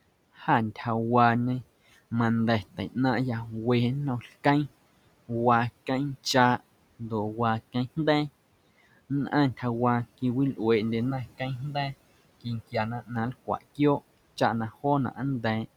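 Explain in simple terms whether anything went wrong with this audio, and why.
From about 11.1 to 13.2 s the speech turns hollow and phasey: that's channel delay (comb filtering), one channel arriving roughly a millisecond and a half late, cancelling some frequencies.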